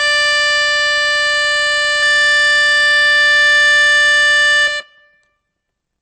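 A lossy encoder, likely MP3 at a very low bitrate around 30 kbps, has starved this music of bits across the whole clip. Weak spectral lines flicker between frames, giving a watery, swirling texture with smeared attacks and metallic chirps.

Throughout, a filter is restarted on every block, discarding its memory and beginning each block from silence. Each restart leaves a small transient, and together these form a steady 172 Hz buzz that rises and falls with the music's level, which fits a 256-sample block.

From 2.03 s to 4.83 s, a doubled audio track appears, likely from a second, slower capture path mixed in with the first. A full-band copy trails by roughly 150 ms, a few dB quieter, with no reverb tail, and it starts and stops abruptly.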